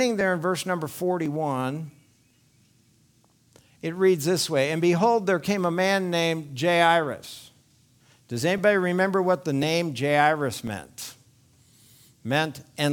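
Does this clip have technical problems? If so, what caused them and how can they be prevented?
Yes. From 0.21 s to about 12.77 s there's a regular tick, a click or pop about every 1.05 s, about 15 in all. That steady spacing is the signature of clock drift buffer slips. The likely cause is two devices on independent clocks, one running roughly a tenth of a percent off. The buffer between them creeps until it drops or repeats a few dozen samples. To prevent it, lock both devices to one shared word clock, or resample adaptively at the boundary.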